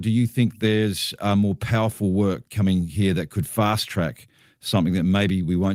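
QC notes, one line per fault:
Nothing to flag on this speech recording, so there's no fault to log here.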